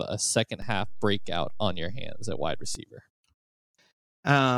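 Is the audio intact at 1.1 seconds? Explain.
No. A DC step runs from 0.62 to 2.75 s, so 1.1 s falls inside it. The waveform's zero line jumps by about -30 dBFS and holds there, giving a low thump at 0.62 s and another when it returns at 2.75 s, while the speech carries on unchanged.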